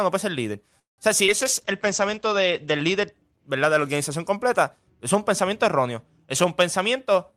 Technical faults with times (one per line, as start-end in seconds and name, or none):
0.79-1.00 call audio freeze
1.26-1.30 short concealed packet loss
1.41-3.18 call bitrate drop
6.44-7.32 jitter buffer speed-up